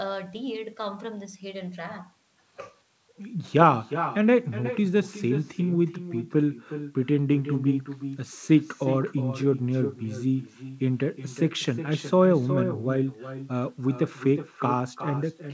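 From start to finish, echo with no canceller shadows the speech with a thinner copy about 10 dB quieter, arriving roughly 0.4 seconds later. The waveform shows a faint, delayed repeat trailing each burst, above a spectrum that stops at 8 kHz.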